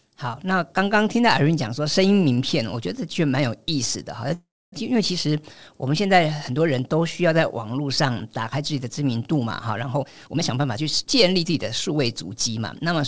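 From 4.34 to 4.74 s the speech halts in a call audio freeze, likely caused by delayed packets draining the jitter buffer. The last sound continues briefly as a fading buzz, then goes quiet for about 270 ms. The waveform shows a decaying tail and then a flat gap, and the spectrogram shows smeared, blurred bands dissolving into blank space. The speech then resumes where it stopped, about 380 ms later.

From 9.93 to 12.76 s a jitter buffer speed-up shortens the audio. The receiver repeatedly trims short pitch-period pieces, dropping around 0.4 s in total, so the speech plays at about 113% speed at unchanged pitch and sounds hurried. The spectrogram shows compressed syllable spacing, still cut off above 8 kHz by the call path.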